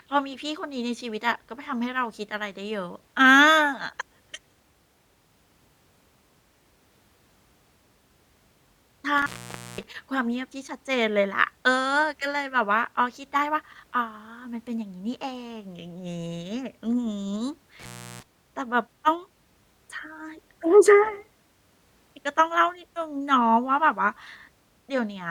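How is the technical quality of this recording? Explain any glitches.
The recording suffers from two dropouts caused by an intermittent contact. A loose cable or plug momentarily breaks the signal path, from 9.18 to 9.83 s and again from 17.79 to 18.23 s. The speech cuts out for 0.52 s and 0.35 s, with crackle at each edge and faint hiss while the line is open.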